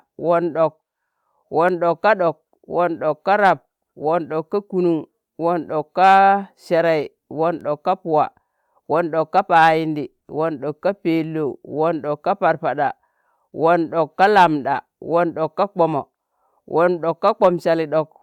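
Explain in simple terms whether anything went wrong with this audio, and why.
Hard clipping occurs at 3.45–3.51, 6.04–6.19, 9.38–9.69 (after "won ɗok ka"), 14.22–14.46 and 17.28–17.48 s. These loud moments exceeded the recording's limit, flattening their peaks into brief, harsh crackle.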